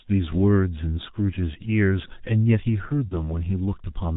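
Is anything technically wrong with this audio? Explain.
Yes. The speech has two faults: a low-bitrate telephone codec throughout and a concealed packet loss near the end.

The whole clip carries heavy G.723.1 codec damage. The codec works on long 30 ms frames with a slowly updated voice model and nothing above 4 kHz, and the degree of dullness fits roughly a 6 kbit/s setting. The result is muffled, hoarse speech with smeared consonants. Unlike a plain band-limited phone line, the hoarseness and blurring also come from coarse frame-by-frame modelling, not only from the missing highs.

From 3.08 to 3.16 s there is VoIP packet loss concealed by the speech codec. About 30 ms of audio, consistent with one lost frame, was rebuilt by extending the last pitch and filter at falling gain, so the sound stretches into a brief buzzy tone or coloured noise that fades. Because each frame builds on the previous one, the speech stays weakened for a while after packets resume. 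An ordinary dropout would instead leave a silent gap or a click.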